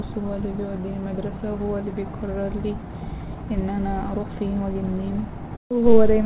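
The speech has no technical faults, and its band stops at 4 kHz, which fits a narrowband telephone-style call path such as G.711.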